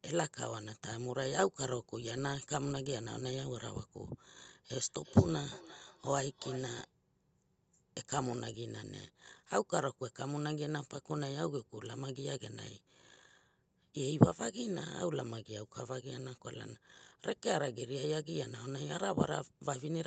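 Speech passed through a call on which a second device in the same room was replaying the audio. From 4.71 to 6.92 s, a feedback echo between two devices loops the sound back through a microphone whose echo canceller cannot remove another device's playback. Each word returns roughly every 0.4 s, thinner and ringing, at about 15 dB below the speech. The call path limits the audio to 8 kHz.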